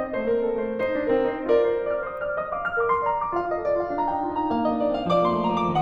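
Across the whole music clip the left and right channels are drifting apart, as if recorded on two devices whose clocks disagree by roughly 70 parts per million. The inter-channel delay grows steadily, reaching about 0.3 ms by the end. Summed to mono, this sliding offset produces a slow flanging sweep. A spectrogram of the mono sum would show comb-filter notches gliding gradually down through the upper spectrum.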